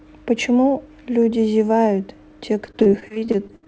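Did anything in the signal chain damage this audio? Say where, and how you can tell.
Yes, repeated packet loss (robotic sound) at the network stage, from 2.66 s to the end at 3.68 s. Fifteen gaps in this one-second stretch, the longest about 66 ms, give the speech a choppy quality with pieces missing. The receiver's concealment stretched the preceding sound across roughly 300 ms and left about 280 ms missing, so around 30% of the span is patched. The call codec's band limit, nothing above 8 kHz, fits G.722 at 64 kbps.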